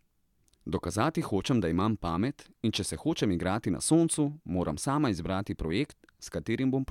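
Nothing technical goes wrong anywhere in this bit of speech, so there's no fault to point to at any moment.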